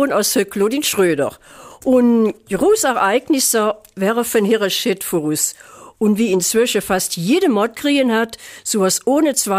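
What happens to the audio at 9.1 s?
Nothing goes wrong at 9.1 s; the audio plays through that moment intact, with no audible fault.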